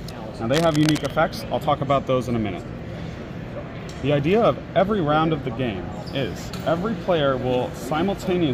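From 0.53 to 1.11 s, a burst of cable scratch noise rides over the sound: dense, uneven scratching and rustling at roughly 10 dB below the signal. This is likely a worn cable, connector or control being moved, its contact resistance jumping rapidly as it shifts. Unlike the isolated, evenly spaced clicks of buffer dropouts or steady background crackle, this noise comes in one thick, irregular cluster lasting just over half a second, then stops.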